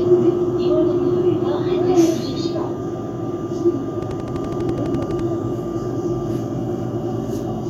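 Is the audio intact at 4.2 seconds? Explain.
No. A repeating pulse, likely interference or a faulty connection, produces a train of clicks from 4.03 to 5.20 s: about fifteen regular ticks at 12 per second, peaking about 5 dB above the sound.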